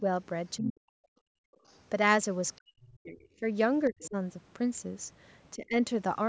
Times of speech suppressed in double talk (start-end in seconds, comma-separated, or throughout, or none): 0.57-0.96, 2.57-3.44, 3.89-4.16, 5.56-5.76